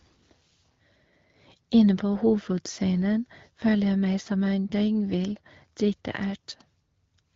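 From 3.61 to 3.66 s the speech turns briefly hoarse and gargly, which points to AMR bit errors. For about 40 ms, which fits two 20 ms codec frames, a small share of the lightly protected bits arrived flipped. The decoder misplaced its excitation pulses and skewed the fine pitch, gain and spectral values. Pitch and loudness hold roughly steady. A spectrogram shows smeared, noisy harmonics over that slice, and the waveform looks jagged and irregular instead of periodic, within speech carried by the AMR wideband codec at 12.65 kbit/s.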